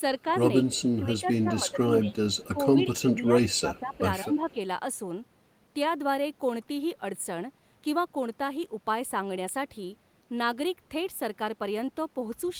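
From 0.13 to 4.57 s the speech repeatedly dips, sometimes by as much as 15 dB, thinning and breaking up for around three seconds in total. This is speech suppressed in double talk: both ends were likely talking at once, and the echo canceller, unable to tell the local voice from loudspeaker echo picked up by the microphone, pulled the level of everything down until the overlap ended.

Inside that stretch, at 0.32 to 1.2 s, 2.31 to 2.48 s and 3.76 to 4.54 s, and again briefly at 12.47 to 12.53 s, a faint copy of the voice trails 201 ms behind, roughly 30 dB under the main speech. That is echo leak: the far side was likely on a loudspeaker, and its canceller let part of the returned sound slip back into the call.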